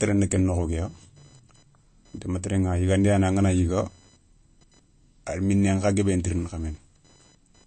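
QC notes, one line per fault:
throughout, computer activity noise: A faint, thin buzz sits under the speech for the whole clip, pulsing at roughly 1 kHz and sitting around 40 dB below the speech. Its rhythm belongs to the machine, not the talker. Current drawn by the processor, graphics or other busy parts pushes small voltages onto the ground shared with the audio circuit, and that interference rides into the recording as a buzzing tone.
throughout, MP3 compression: The speech sounds plainly watery and swirly, with a metallic edge on sibilants and softened consonant onsets, and the top end stops dead at 8.3 kHz, leaving the voice dull and boxed in. This is likely heavy MP3 encoding at a low bitrate, which fits something near 35 kbps. Short of bits, the encoder discards the treble above a fixed cut-off and drops quieter frequency components, which flicker in and out between frames.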